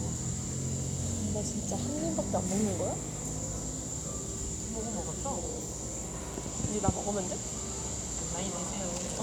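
No technical faults can be heard anywhere in the recording; the signal stays intact and continuous for its whole duration.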